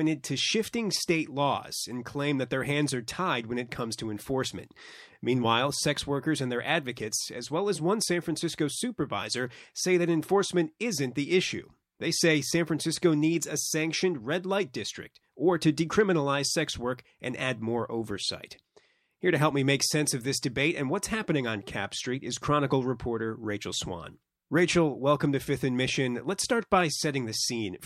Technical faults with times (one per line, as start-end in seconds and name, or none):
none